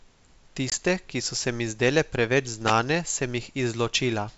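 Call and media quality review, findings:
Packet loss on ADPCM call, 0.70–0.73 s: one packet, 20 ms, dropped and filled with silence. Decoder predictor and step size desynced, so a hard-edged gap, then speech resumes slightly distorted until the state realigns.

Wireless microphone noise hit, 2.65–2.73 s: the FM radio link faded as reflections cancelled, and receiver noise rose. Heard as an 80 ms swish of static over the speech.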